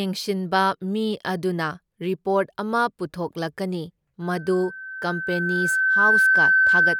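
Speech clip with loudspeaker feedback squeal from 4.22 s to the end: a 1.5 kHz tone, mic hearing its own speaker, swelling over roughly two seconds to sit well above the voice.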